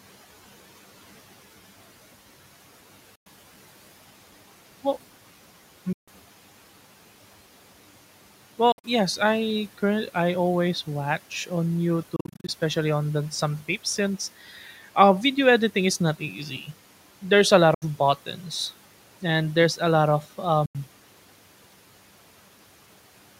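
Packets most likely failed to reach the headphones in time, giving Bluetooth dropouts: the speech falls silent at 3.15 s (about 100 ms) and 5.93 s (145 ms), then stutters through several short gaps between 8.72 and 8.84 s and between 12.16 and 12.49 s, and drops again at 17.74 s (73 ms) and 20.66 s (87 ms), each time resuming further on. At 14.46 to 14.68 s the noise suppressor mistook part of the speech for noise, pulling about a tenth of a second down by up to about 7 dB, so it sounds swallowed.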